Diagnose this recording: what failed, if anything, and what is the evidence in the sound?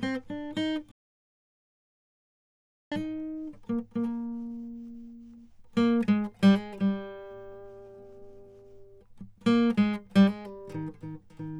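A playback stall: the music stops at 0.91 s and resumes at 2.92 s, a blank two-second column on the spectrogram, likely from a starved player buffer.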